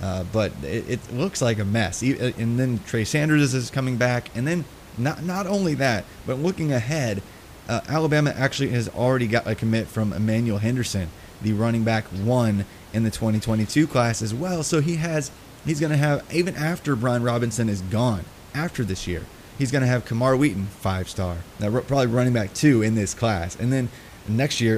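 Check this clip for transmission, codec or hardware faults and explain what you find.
No faults found; only faint room noise beneath the speech.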